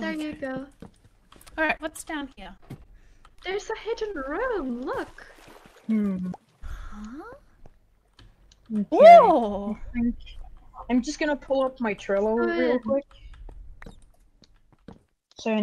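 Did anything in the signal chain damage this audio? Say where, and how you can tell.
Yes, the network stage damaged it. From about 1.65 s to 4.71 s there's repeated packet loss that gives the sound a choppy, robotic edge. It reads as well over a dozen short dropouts, none longer than about 37 ms. Around 319 ms of that span gets patched by stretching the last good sound, and another 260 ms or so is simply missing. The holes arrive faster than the concealment can smooth them over.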